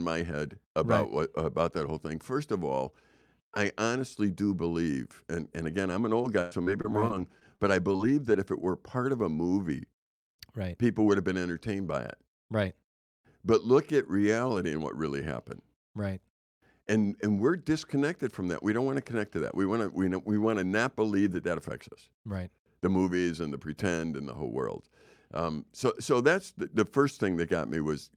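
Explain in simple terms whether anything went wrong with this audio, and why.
Yes, something went wrong. From about 6.22 to 8.35 seconds, right after "and again I'm an", the speech breaks up until "if it were part". This is repeated packet loss, giving a robotic sound. Small pieces of the audio never arrived, about a dozen short holes, the longest around a tenth of a second. Each hole was filled by stretching the last sound. So the voice turns choppy.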